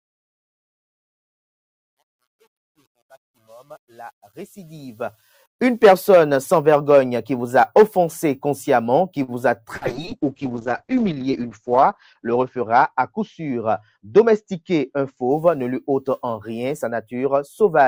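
From the start to 5.85 s, the fade-in carries truncation distortion on a fade. The gain stage keeps only about 8 bits with no dither, so the quiet opening, worst up to 5.18 s, turns gritty. That is stepped grain, not hiss, and it disappears as the level rises.

At 9.23 to 9.31 s comes a short stall from a late packet. The jitter buffer ran dry, and the receiver held the last sound for 46 ms until the packet arrived. Nothing is lost; the sound just lingers, adding 46 ms of delay rather than a gap.

From 9.77 to 15.61 s there is a call bitrate drop. The encoder was pushed from 64 down to 7 kbps, and the bandwidth narrowed from 20 kHz to 8 kHz. The audio turns muffled and watery, lowest for about 1.8 s. This is a sustained change in tone, unlike the brief glitches around it.

At 9.77 to 9.84 s, a short concealed packet loss overlaps the start of that drop. 40 ms never arrived, and 44 ms was synthesised from the preceding sound before it blended back. 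It comes across as a quick smear or wobble. Unlike the stall, real audio is genuinely missing.

From 13.39 to 13.99 s, a jitter buffer speed-up trims about 50 ms in small pitch-period cuts to shed excess delay. The audio runs about 9% fast while its pitch stays the same, so it sounds hurried rather than raised.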